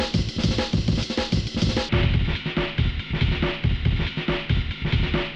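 A playback or editing stage likely ran this opening section against the wrong clock, giving a section at the wrong speed: from 0.00 to 1.89 s the audio plays 1.45 times too fast, so it sounds hurried and raised by roughly seven semitones, pitch and tempo shifted together.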